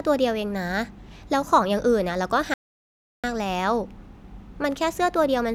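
A speech recording with one audio dropout to silence, from 2.54 s to 3.24 s. For about 0.70 s the signal falls to silence, cutting off mid-flow and resuming just as abruptly, so whatever was said in that stretch is lost. The cause is likely a brief loss of input, such as a disconnect or momentary mute, while recording continued. Unlike a natural pause or a noise gate closing, the gap has no trace of room tone or background hiss.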